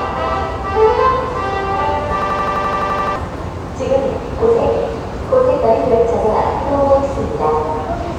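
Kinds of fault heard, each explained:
System hang loop: from 2.22 to 3.16 s a single 85 ms slice of sound repeats eleven times, a machine-gun stutter at 11.7 Hz. The system froze while the hardware kept replaying its ring buffer, which fits a 4096-sample buffer, losing about a second of audio.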